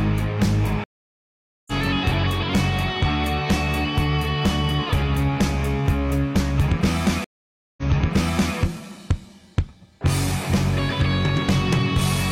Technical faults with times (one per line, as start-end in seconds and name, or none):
0.84-1.72 stream reconnect
7.24-8.56 stream reconnect